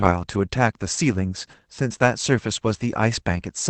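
At 2.75 to 2.77 s there's a lost packet rebuilt from error correction: the decoder played a rough low-bitrate copy, likely of a single 20 ms packet, so there's a brief grainy, noisy patch instead of a gap.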